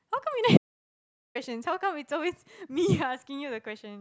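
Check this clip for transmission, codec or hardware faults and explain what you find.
One fault is present: an audio dropout to silence from 0.57 s to 1.35 s, about 0.78 s long. The speech cuts off abruptly into digital silence with no room tone, then resumes mid-flow. This likely comes from the input being lost while the recorder kept writing zeros.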